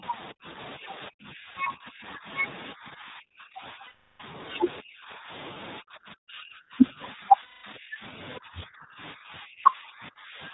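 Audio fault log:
throughout, iLBC codec: narrowband 20 ms frames at 15.2 kbps leave a rough, synthetic edge; the spectrogram shows nothing above 4 kHz, a hard ceiling.
0.00–0.58, 0.77–2.28, 2.73–4.38, 4.81–5.31, 5.80–8.15, 8.38–10.54 s, speech suppressed in double talk: level dips by about 25 to 35 dB in chunks, likely the echo canceller ducking during overlap; the waveform shows collapsed stretches.
3.86–4.20 and 7.42–7.65 s, lost iLBC frames: 340 ms and 220 ms gaps filled by a held, buzzy repeated pitch cycle, seen as flat harmonic bands.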